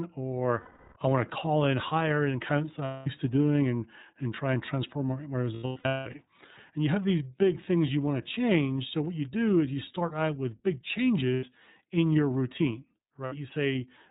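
Lost iLBC frames break up this speech clip at 0.60 to 0.97 s, just before "I want to call", and at 2.85 to 3.07 s, 5.55 to 6.15 s, 11.34 to 11.44 s, and 13.25 to 13.33 s, just after "in your routine". Each gap becomes a held, buzzy vowel as the decoder repeats its last pitch cycle mixed with noise. The first gap, 0.36 s, fades as it goes on. The one after "and transform my my" is a cluster of shorter dropouts spread over 0.6 s, the longest about a fifth of a second. The gap lengths step in multiples that fit 30 ms frames. Because each frame decodes on its own, the voice snaps back at once after every gap. The iLBC codec is plainly audible throughout. The speech is cut off above 4 kHz and sounds rough and synthetic, which fits the codec's 13.33 kbps mode.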